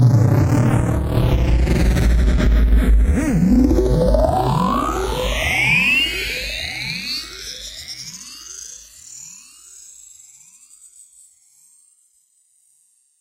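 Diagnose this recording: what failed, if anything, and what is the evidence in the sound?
What failed is the clocking between the two channels: you're hearing channels drifting apart, all the way through. The left and right sides behave like two converters on separate clocks, off from each other by something like 100 parts per million, so the delay between them creeps from zero to around a millisecond by the end. Fold it to mono and the comb notches glide slowly across the spectrum, which comes across as a slow, steady flanging over the whole sound.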